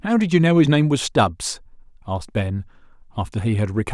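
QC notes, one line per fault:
Nothing stood out on listening to this speech recording.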